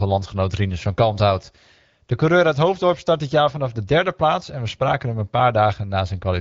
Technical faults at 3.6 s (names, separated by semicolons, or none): none